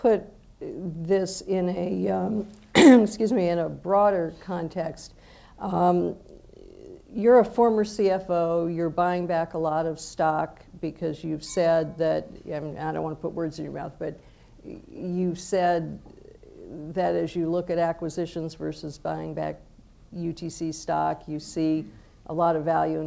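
No technical faults can be heard in this audio. It has passed through a working WebRTC call path, and nothing reaches above 8 kHz, which fits a wideband call codec such as G.722.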